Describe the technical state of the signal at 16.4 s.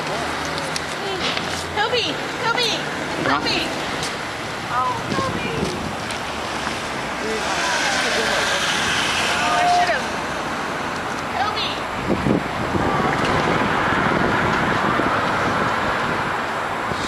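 At 16.4 s the signal is intact, with no dropouts, distortion or other fault audible at that moment.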